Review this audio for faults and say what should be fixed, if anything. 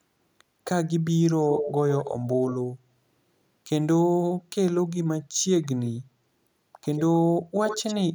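Echo leak at 1.45–1.73, 1.90–2.28, 2.47–2.55, 5.63–5.68, 6.82–7.02 and 7.67–7.97 s: delayed copies of the speech, 138 ms behind early on and 95 ms later. They range from nearly as loud to barely audible. The likely cause is a far-end loudspeaker whose echo canceller let its microphone pickup through. Unlike room reverberation, these are distinct, intermittent repeats rather than a smooth tail. Prevent it by having the far end use a headset or retune its echo cancellation.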